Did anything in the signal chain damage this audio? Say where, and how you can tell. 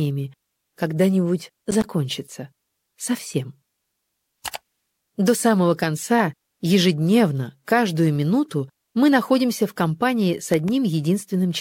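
Yes. Loose connector crackle at 1.59–1.93 s and 10.54–10.69 s points to the analogue wiring: an intermittent contact chops the signal into irregular scratchy bursts.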